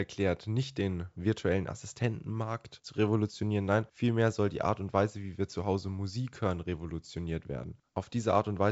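No faults can be heard anywhere in this speech.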